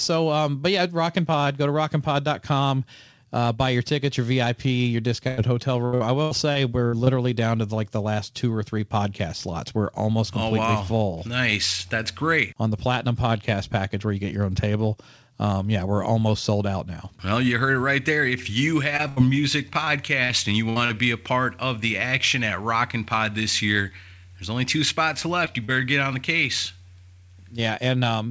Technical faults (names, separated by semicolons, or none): repeated packet loss (robotic sound); short concealed packet loss; burst of packet loss